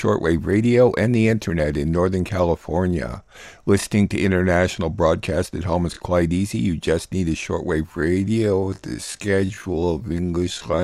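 Speech, and right after "just need a" at 7.84 s it turns into a time-stretched section running to the end, slowed to 0.59x with the same pitch, dragging, likely from stretching software fitting it to a length.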